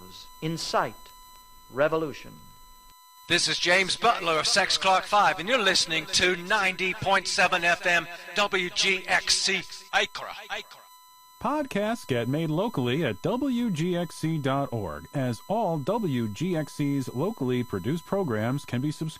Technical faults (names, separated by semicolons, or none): USB whine; MP2 compression; DAB burbling